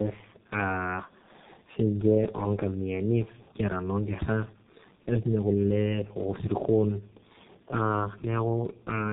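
Tandem speech coding affects the whole of this speech clip. It was decoded and re-coded by two low-rate speech codecs in a row, so the second worked on the first's damage. The result is rough, muffled and warbly, with nothing above 3.8 kHz. That fits G.729A feeding G.723.1 via G.711.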